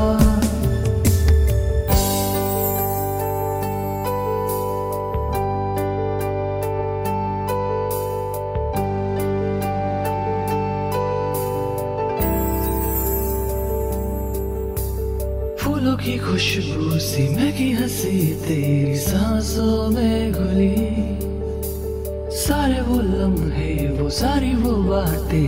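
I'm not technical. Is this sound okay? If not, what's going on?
Yes, no faults heard.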